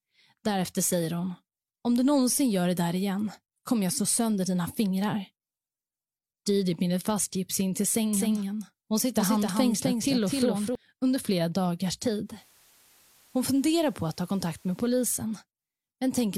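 From 8.13 to 10.75 s, a doubled audio track: the speech repeats about a third of a second late, a few dB quieter, likely from a second capture path. From 12.22 to 15.04 s, digital radio blending to analogue: a 226 ms cross-fade to FM brings in faint hiss at an unchanged level, then blends back.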